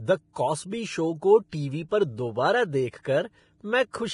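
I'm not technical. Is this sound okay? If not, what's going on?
No. Throughout the recording the speech sounds hissy and grainy, with nothing above about 10.5 kHz, so it lacks crispness. That points to heavy Vorbis compression as the likely cause: squeezing the file hard turns fine treble detail into coarse noise.

There is also pre-echo, a brief hiss that arrives just before a sharp sound and softens its start. It happens at 0.33 to 0.36 s, and at 1.89 to 1.91 s, between "शो को टीवी" and "पर दोबारा देख". The compression spreads its noise slightly ahead of each attack.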